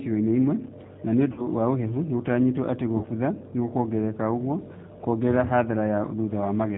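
Throughout, the speech carries plainly audible G.729 codec damage at 8 kbit/s. The coder rebuilds each frame from a vocal tract filter, a pitch predictor and a few pulses, so voices sound rough and synthetic. A spectrogram shows nothing above 4 kHz.

VoIP packet loss concealed by the speech codec occurs from 1.32 to 1.48 s, just before "wa ũhehu nĩgũtanyĩtwo atĩ". It occurs again from 2.97 to 3.06 s, between "wa ũhehu nĩgũtanyĩtwo atĩ" and "nĩgũkuongerereka ũguo kuongerere". Each gap is 60 ms of missing audio, which points to two lost packets. The decoder extends the last pitch and filter as a fading buzzy tone or coloured noise. On a spectrogram this shows as smeared, repeated harmonics. On a waveform it shows as a decaying envelope, and the speech stays weak briefly afterward.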